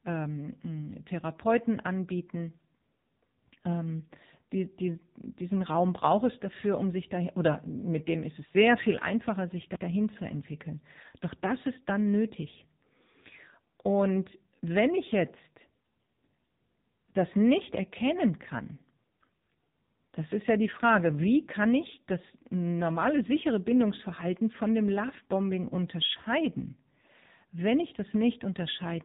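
Throughout, the speech sounds buzzy and synthetic, with nothing above 3.8 kHz: heavy AMR narrowband mobile codec damage, which points to a low rate near 6.7 kbps.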